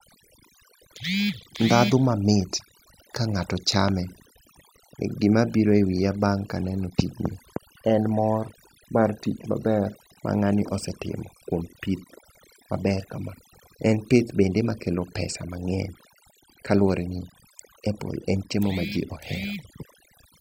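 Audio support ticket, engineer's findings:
Overdone noise removal, whole clip. Background dropped, broken into twinkling specks. Denoiser set too aggressive: bands near its noise estimate pulled down or gated off, taking low-level speech detail with them. Reduce suppression depth.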